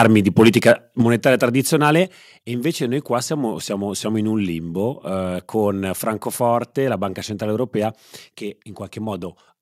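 Microphone overload from 0.00 to 0.71 s: the peaks run about 7 dB past the converter's limit, likely from input gain set too high, so their flattened tops give the loudest syllables a harsh crackle. Microphone volume stepped down at 1.02 s: the level drops about 5 dB at once, likely the call software cutting input gain after that distortion. A brief microphone overload recurs from 1.85 to 1.90 s, just before "e invece noi qua", only about 1 dB over. Another microphone volume step down at 2.04 s, right before "e invece noi qua", lowers everything about a further 4 dB.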